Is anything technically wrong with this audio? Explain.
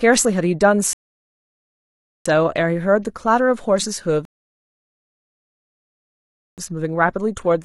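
Yes. The speech halts twice with rebuffering stalls, at 0.93 to 2.26 s and at 4.25 to 6.58 s, adding about 1.32 s and 2.33 s. The player exhausted its downloaded audio and waited for more, so the sound drops to silence and then picks up exactly where it stopped, with nothing skipped. On a waveform each stall is a flat line; on a spectrogram it is a blank vertical band with a hard edge on both sides.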